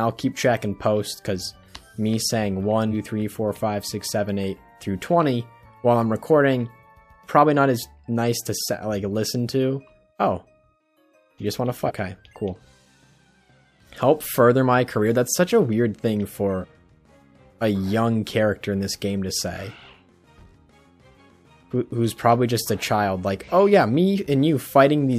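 At 11.87 to 11.91 s the audio jumps forward, dropping roughly five compressed frames, about 200 ms of material. The same compressed-frames-skipped fault recurs at 16.60 to 16.65 s, this time losing around three frames, near 150 ms. The decoder did not play whole frames, either missing or rejected as damaged, and the jump sizes fit a 46.4 ms codec frame.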